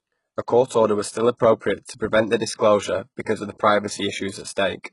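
Speech clip with heavy HE-AAC compression throughout. Nothing survives above 11.1 kHz, and the treble below that sounds copied up rather than real. A very low bitrate, around 12 kbps, is the likely cause.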